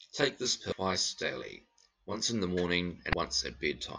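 Channel delay (comb filtering), 0 to 2.21 s: one channel lags by roughly 20 ms, and the mono sum cancels evenly spaced frequencies from around 20 Hz upward, leaving the speech rough or slightly doubled. Damaged data in a compressed stream, at 0.72 s and from 2.77 to 3.14 s: corrupted frames make the decoder lose sync and hunt for the next header, heard as a momentary glitch and then a longer disturbed stretch.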